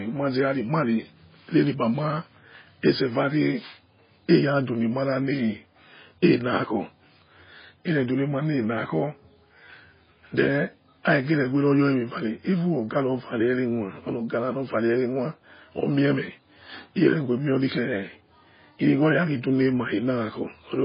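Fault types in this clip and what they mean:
MP3 compression: the speech likely went through heavy MP3 encoding, fitting a bitrate near 16 kbps. Nothing survives above 5 kHz, a hard flat ceiling on a spectrogram, while weak components below flicker on and off frame to frame, sounding watery with smeared onsets.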